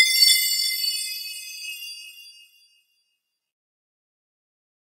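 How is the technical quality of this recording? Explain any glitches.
No glitches can be heard anywhere in this recording of sounds. Nothing in it breaks, drops out or jumps at any point.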